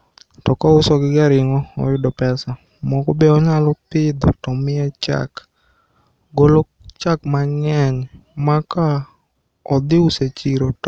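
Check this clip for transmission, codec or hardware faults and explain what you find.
Checking the clip turns up no faults to explain.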